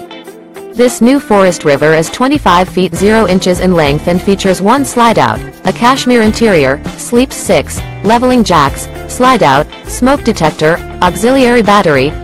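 Throughout, a stage in the signal chain is driven about 10 dB past its limit, so the waveform's peaks are sliced flat on roughly one sample in twenty. This hard clipping adds harmonics high in the spectrum, giving a harsh fuzz on every loud sound.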